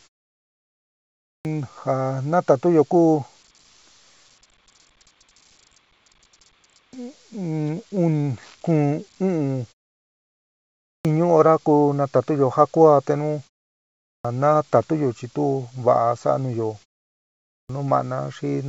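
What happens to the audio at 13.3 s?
Nothing goes wrong at 13.3 s; the speech there comes through intact, carried by the G.722 call path with its content ending at 8 kHz.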